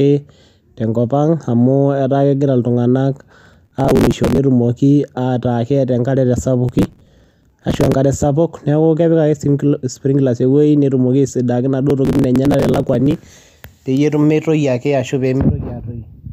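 Processor overload crackle appears at 3.31 to 4.38 s, just after "kegira iltunganak", then at 6.69 to 7.96 s and 11.90 to 13.41 s. Missed deadlines skip buffers of a few milliseconds each, leaving hard-edged gaps heard as gritty tearing. On a spectrogram these show as dense vertical broadband streaks, and on the waveform as tiny dropouts.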